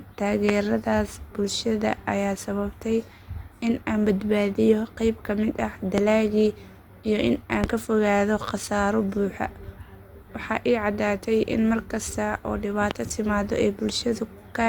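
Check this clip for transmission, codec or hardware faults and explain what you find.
There's one real problem here: four loud pops cut through the speech. They land at 0.49–0.51 s, 5.98–6.01 s, 7.64–7.67 s and 12.91–12.94 s, each a single sharp hit lasting about 25 ms and jumping well above the speech level, roughly 15 to 20 dB over it. The likely cause is a sudden voltage step or spike, say from a plug, switch, static discharge or driver glitch, which the downstream circuitry smears into a short thump. The speech just carries on underneath each one.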